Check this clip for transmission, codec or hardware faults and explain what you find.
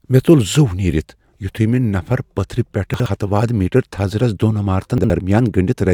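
There's one fault here, and it happens twice: chunks out of order, at 2.94 to 3.06 s and again at 4.98 to 5.10 s. Each time a 60 ms piece of the speech arrives one chunk late and plays after the piece that should follow it. Nothing goes missing, but the reshuffle leaves three hard joins, so you hear a brief jumbled stutter.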